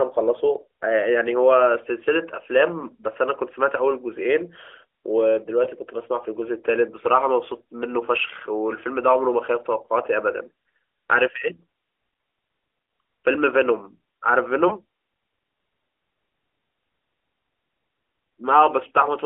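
A brief dip and warble in the speech at 5.64 to 5.69 s, and again at 14.68 to 14.71 s, each fitting a single lost 20 ms frame. These are lost AMR speech frames. Radio errors corrupted a frame, and the AMR narrowband mobile codec (speech band about 300 Hz to 3.4 kHz, mild damage consistent with the 12.2 kbps mode) bridged the gap by replaying its last good pitch and vocal tract settings at reduced gain.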